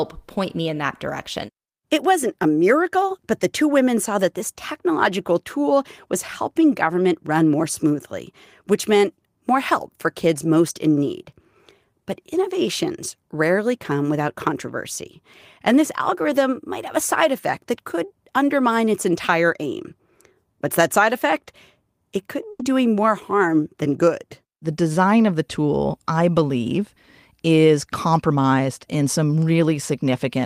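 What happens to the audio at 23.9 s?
At 23.9 s the speech carries on intact, with no dropout, click, distortion or other fault at that moment.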